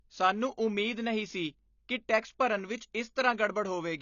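Throughout, the speech sounds dull and smeared, with nothing above 7 kHz. This is likely AAC compression, cutting off highs at a bitrate near 24 kbps.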